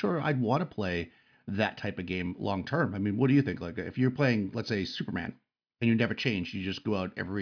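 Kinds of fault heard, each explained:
No technical faults detected.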